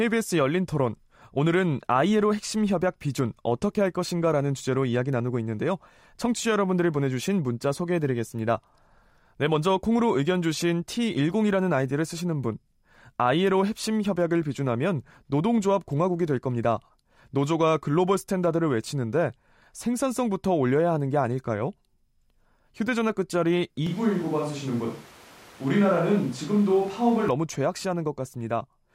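A switch to a distant microphone runs from 23.87 s to 27.29 s in this speech recording. The voice turns abruptly roomy and hollow, losing its low end, and room noise rises to roughly 25 dB below the speech, while overall loudness stays about the same. It snaps back just as suddenly at the end. The likely cause is that the close microphone dropped out and a farther pickup, such as a camera mic, covered the gap.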